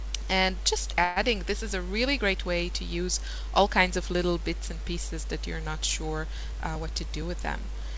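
From 1.04 to 1.18 s a call audio freeze stretches the last sound into a fading buzz for 124 ms, likely packets delayed past an empty jitter buffer; playback then resumes with nothing lost. From 6.37 to 7.30 s a jitter buffer speed-up trims repeated pitch periods, about 40 ms in total, so the sound runs at 104% with unchanged pitch. Throughout, the G.722 call path leaves nothing above 8 kHz.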